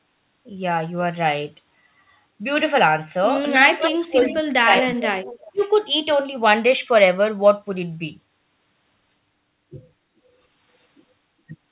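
From 3.54 to 4.4 s, an echo canceller likely confused by both sides talking at once turned the near talker down too, so speech suppressed in double talk dips by up to about 15 dB across roughly 0.7 s. Inside that stretch, at 3.99 to 4.07 s and 4.25 to 4.37 s, the canceller likely failed to remove all of the loudspeaker pickup. That echo leak sends back faint copies of the sound 381 ms late, about 25 dB and then about 20 dB below the speech. From 4.63 to 5.63 s, speech suppressed in double talk, likely from the same canceller, cuts deeper, by up to about 30 dB, for about a second. From 5.26 to 5.63 s another echo leak, likely residue the canceller missed, brings back the copy 383 ms late at about 20 dB down. Throughout, the G.711 call path carries nothing above 4 kHz.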